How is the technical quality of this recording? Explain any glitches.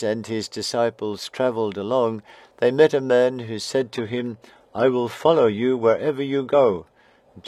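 The recording has one glitch, an adaptive stream switching to a lower bitrate from 3.77 s to the end. The player dropped to a lower-bitrate version, which fits a switch from roughly 96 kbit/s AAC to about 20 kbit/s HE-AAC. Without any gap, the treble abruptly loses detail, nothing above 14.9 kHz remains, and codec artefacts thicken.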